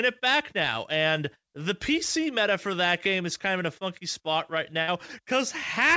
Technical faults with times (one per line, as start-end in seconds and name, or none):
4.82-4.90 burst of packet loss